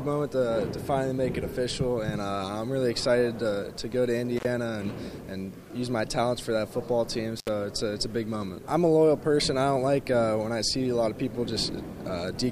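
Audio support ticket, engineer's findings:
Intermittent contact, two dropouts: 4.37 to 4.45 s and 7.39 to 7.49 s, open about 62 ms and 68 ms. Probable loose cable or plug briefly breaking the signal path. Waveform shows collapse to near-flat with spiky crackle edges; spectrogram shows vertical broadband clicks bracketing a faint hiss gap.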